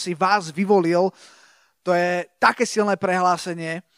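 No technical faults are audible in this speech.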